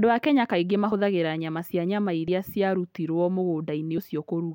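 At 0.92, 2.28 and 3.97 s the speech lurches forward with a brief smeared blip: compressed frames skipped, dropping about 50 ms (roughly two 26.1 ms frames), then about 30 ms (one frame) twice.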